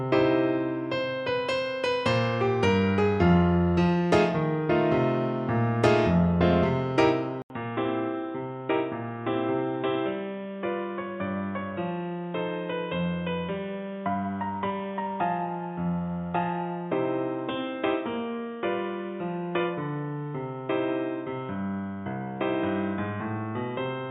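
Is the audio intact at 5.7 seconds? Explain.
Yes, at 5.7 seconds the audio is intact, with no dropout, click, distortion or other fault to be heard at that point.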